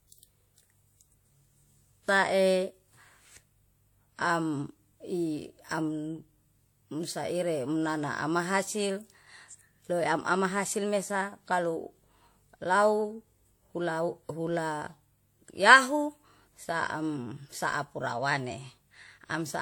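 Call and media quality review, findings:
Throughout: two codec artefact sets layered, heard together. Nothing above 18.4 kHz. Likely transcoding between lossy codecs: HE-AAC, fitting about 40 kbit/s, re-encoded as WMA near 64 kbit/s. Artefacts compound; lowest cut-off persists.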